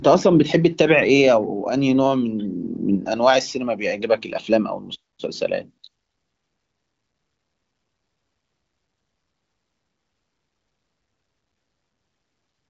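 No faults found; the speech is carried by an AMR wideband (HD Voice) codec path at a high rate, with nothing above roughly 7.6 kHz.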